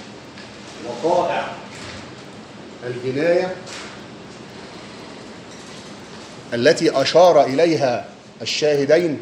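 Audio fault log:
Throughout: resampler restarted on every block. Ticks recur every 250 ms (4.0 Hz), from a likely 24 kHz to 48 kHz converter losing neighbouring samples at each block edge.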